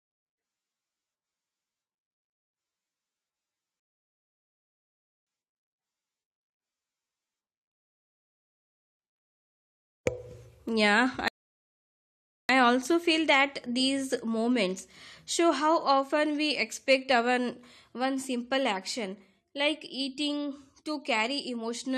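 At 3.80 s the speech halts in a rebuffering stall: playback ran short of downloaded audio and went silent until more arrived, then picked up at 5.27 s exactly where it stopped, adding about 1.47 s. A second stall runs from 11.28 to 12.49 s, adding about 1.21 s. Unlike a dropout, which skips material, the speech continues seamlessly after each gap and nothing is lost.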